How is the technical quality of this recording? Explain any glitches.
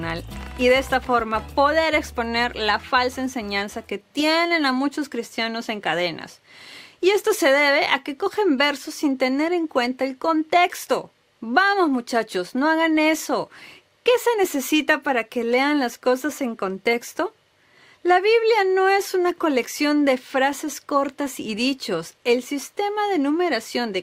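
No glitches occur anywhere in the recording, and the signal holds steady and intact throughout.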